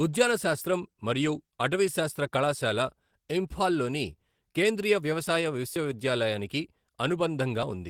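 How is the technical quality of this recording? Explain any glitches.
The recording carries plainly audible Opus voice compression throughout. The codec is running in hybrid mode, coding speech below 8 kHz by linear prediction and the band above with a transform layer. The sound fits a bitrate around 16 kbps, starved enough that the excitation is coded coarsely. The speech comes out hoarse and slightly robotic, though the top end still reaches about 20.3 kHz.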